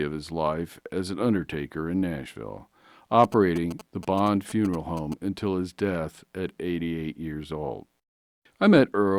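From 3.24 to 5.14 s, a nearby phone's GSM signalling bursts are rectified into a galloping 217 Hz tick-buzz, showing as grouped spectrogram stripes.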